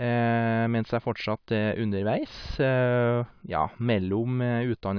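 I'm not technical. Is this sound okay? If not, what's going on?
Yes, nothing in this recording points to a technical problem with how the sound was captured or carried.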